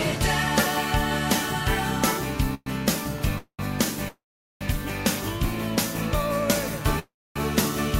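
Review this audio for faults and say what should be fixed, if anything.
Call audio freeze at 2.54, 3.38, 4.08 and 6.99 s: the sound trails into a fading buzz and then silence, the whole gap lasting 0.12 to 0.53 s, then resumes intact, likely because late packets emptied the jitter buffer. A more stable network path, with an adaptive jitter buffer that deepens when delays rise, would prevent it.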